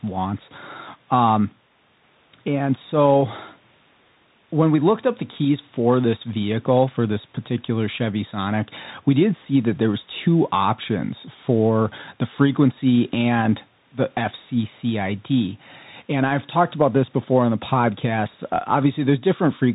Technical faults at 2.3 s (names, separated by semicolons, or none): Bluetooth CVSD headset codec